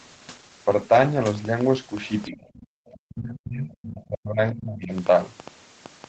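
A speech recording carries four kinds of fault. At 0.82 s a dropped buffer (overrun) splices out a few milliseconds, heard as a small jump; the waveform shows a sudden discontinuity, likely from samples not being read in time. From 1.35 s to the end, a train of clicks arrives irregularly, about 4.1 per second, peaking a few decibels above the speech. These show as thin vertical lines across the spectrogram and are likely interference or a faulty connection. The other side's voice leaking through appears faintly, roughly 30 dB below the talker, at 2.03–2.35 s, 2.53–2.67 s and 2.90–2.97 s. It shows as weak, separate harmonic traces under the main voice, likely echo the canceller left behind. Speech suppressed in double talk hollows out the talker at 2.30–2.78 s and again from 2.98 to 4.93 s. The spectrogram and waveform dip by tens of decibels there, likely because the echo canceller clamped down while both sides spoke. 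Across the whole clip the spectrogram stays within an 8 kHz band, as the call path sets.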